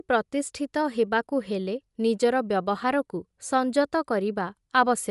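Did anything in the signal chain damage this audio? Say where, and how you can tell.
Yes, at the codec stage, throughout the speech. Nothing reaches above 11.5 kHz, and the top band has a plainly audible breathy, grainy edge. That points to likely Bluetooth LC3 compression, consistent with about 48 kbps and 10 ms frames, zeroing upper spectrum and refilling it with noise.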